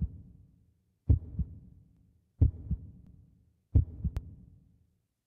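An everyday sound recording with overlapping chunks: at 0.87, 1.97, 3.07 and 4.17 s, a 100 ms segment plays a second time, producing a brief stutter at each join. The audio was handled in 1-second chunks, each starting 100 ms before the previous one ended, so every boundary duplicates that slice. Because each repeat adds 100 ms, the stutters recur every 1.1 s in playback, giving the fault its regular, mechanical rhythm.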